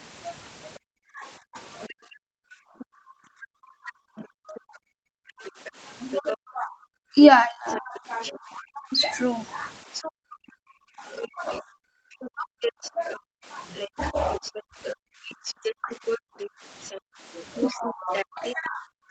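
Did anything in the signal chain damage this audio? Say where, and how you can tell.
Yes. From 0.78 s to the end, the speech keeps dipping, at worst by about 40 dB. This is speech suppressed in double talk. The echo canceller in the call processing likely turned both talkers down together.

A second voice comes through at 1.82–2.85 s, 4.55–6.36 s, 7.69–8.60 s and from 9.93 s onward. It starts faint and grows close to speech level. This is the other side's voice leaking through, likely from incomplete echo cancellation.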